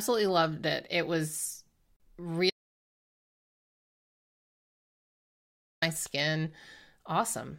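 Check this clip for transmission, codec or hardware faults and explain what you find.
Two faults are audible: a short gap at a join between encoded pieces, and a long dropout to silence.

Gap at a join of encoded pieces, 1.96 to 2.00 s: about 35 ms of silence opens in the middle of continuous speech. The audio was encoded in separate pieces, which fits pieces around 6 s long, and joined without trimming each run's start-up delay and final-frame padding. The sound stops abruptly, with edges smeared by the codec, then resumes exactly where it left off.

Audio dropout to silence, 2.50 to 5.82 s: the speech cuts out mid-flow and about 3.3 s of silence follows, with no room tone at all, before the audio returns mid-stream. The likely cause is a loss of input, such as a disconnected device, a failed link or an accidental mute, while the recorder kept writing silence. Whatever was spoken during that stretch is lost.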